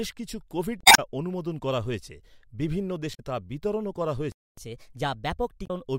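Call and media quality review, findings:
Damaged data in a compressed stream at 0.81 to 0.99 s, 3.11 to 3.20 s and 5.63 to 5.70 s: brief decoding glitches. Decoder misreads corrupt frames, loses sync, resyncs on the next header.

Playback stall at 4.32 to 4.57 s: speech cuts out mid-flow for about 255 ms, then resumes. Likely an output buffer underrun or blocked player thread. Silence, with no chirp, separates it from the corrupt-frame events.

Catch-up at higher speed from 4.57 to 5.87 s, right after the stall: speech runs 1.15 times fast and about two semitones sharp while the player resamples its backlog, then settles back. The steady pitch rise over more than a second distinguishes it from momentary corruption glitches.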